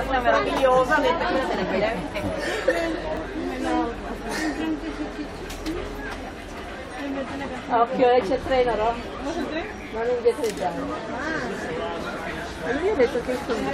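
At 3.17 s an overlap between stream segments makes the player trim about 18 ms of audio it wrongly treats as duplicated, producing a tiny skip.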